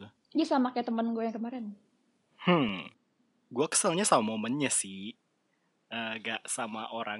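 No technical faults can be heard anywhere here.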